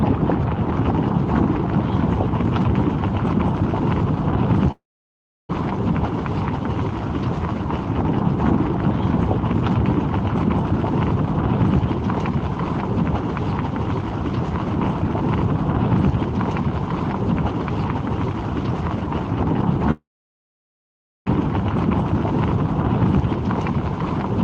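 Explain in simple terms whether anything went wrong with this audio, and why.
Two spots drop out: from 4.71 to 5.51 s, and from 20.91... correction, 19.91 to 21.28 s. Each sounds like a long network dropout, most likely the stream simply stopped arriving. The player smears the last bit of sound into a brief fading buzz, then it's dead quiet for about 0.7 s the first time and 1.2 s the second. When the audio returns, roughly 0.8 s and 1.4 s of it are just gone.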